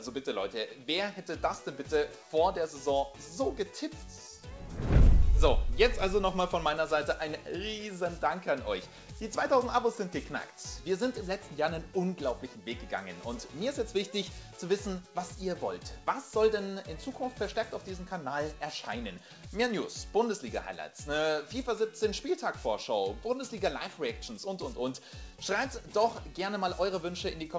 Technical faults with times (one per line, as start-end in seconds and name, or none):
none